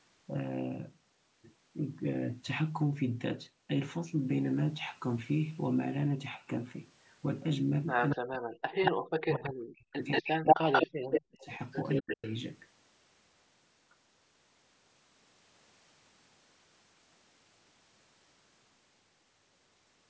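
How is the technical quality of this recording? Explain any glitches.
The recording has two call-processing faults, both confined to roughly 8 to 12.4 s. Nothing appears above 8 kHz, which is consistent with the call's microphone processing.

Echo leak appears at 8.09 to 8.16 s, 8.85 to 8.92 s, 9.34 to 9.5 s, and 10.11 to 12.35 s. A delayed copy of the speech returns about 228 ms late in the first three short scraps and 182 ms late in the long stretch. It is likely a loudspeaker echo that the far end's canceller failed to remove. Levels range from about 10 dB below the speech to about 5 dB above it. On a spectrogram, the harmonic patterns repeat shifted in time. The waveform shows overlapping, smeared envelopes.

Speech suppressed in double talk occurs from 8.15 to 11.49 s, about 3 s affected in total, and again from 12.0 to 12.23 s. The speech dips by up to roughly 40 dB in pieces. This likely happened because the echo canceller could not separate the talker from the echo and turned both down. 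The waveform shows sudden amplitude holes, and the spectrogram shows dark vertical gaps.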